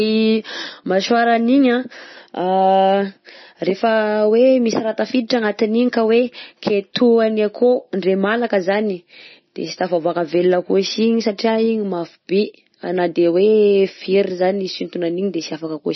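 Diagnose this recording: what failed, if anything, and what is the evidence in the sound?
Throughout, the speech sounds watery and swirly, cut off above 5.9 kHz: likely heavy MP3 compression at the codec stage, starved at roughly 25 kbps.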